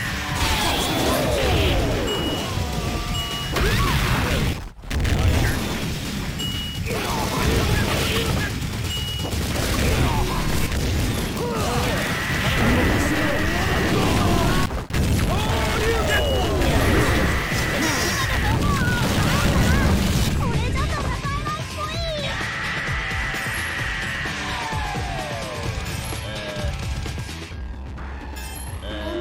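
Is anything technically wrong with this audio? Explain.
Yes. From 0.0 to 20.45 s, sample clock jitter of roughly 10 microseconds mistimes samples, adding roughness around 20 dB below the sound that swells on loud, bright passages and, unlike steady hiss, disappears in silence.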